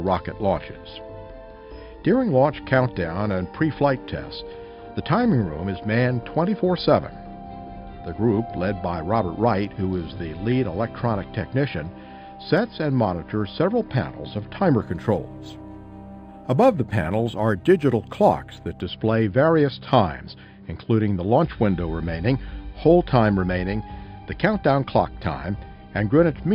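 From 14.82 to 18.81 s the top end dulls and a faint metallic shimmer appears at 5.5 to 11 kHz. This is imaging from linear upsampling: mirrored spectrum copies, roughly 40 dB down, suggest an 11 kHz source interpolated upward.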